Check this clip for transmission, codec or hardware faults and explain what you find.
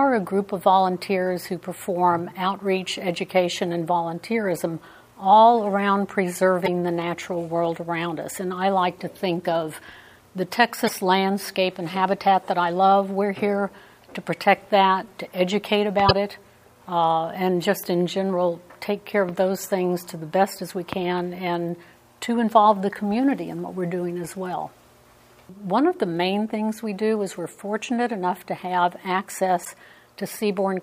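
Four brief faults stand out, all of one kind. Damaged data in a compressed stream occurs at 6.62–6.68, 10.86–10.91, 16.08–16.11 and 29.61–29.67 s. Corrupt bytes make the decoder misread frames and lose sync. Each event is a short disruption of the kind heard as a chirp, squawk, click or short hole.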